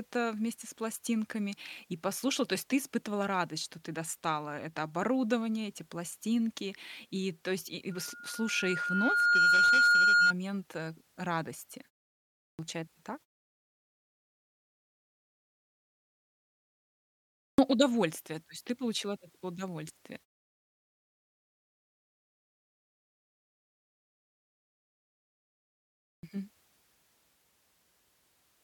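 At 7.91 s, right after "то есть и и", a loudspeaker feedback squeal kicks in: the mic's hearing its own speaker, and a 1.4 kHz tone swells over about a second and a half to roughly 10 dB above the speech, hanging on until 10.33 s, just before "э радости".

Then there's a clipped start after a pause at 12.52 s, 17.52 s and 26.17 s. The output device dozes off in the silence and misses the first 61 to 68 ms of sound when it wakes, so those onsets come in abruptly.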